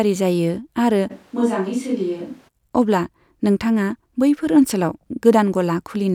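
From 1.12 to 2.47 s, ending just before "अब्ला नोंथाङा", the speech turns abruptly hollow, roomy and bass-light, roughly 5 dB quieter and noisier, likely from a switch to a distant microphone.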